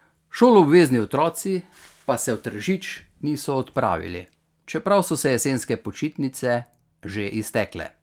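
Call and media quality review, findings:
No audible technical faults were found in the speech signal across the reviewed call and media paths.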